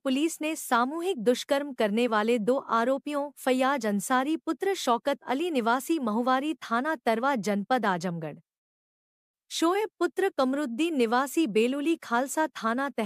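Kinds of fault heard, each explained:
No fault can be heard anywhere in this clip.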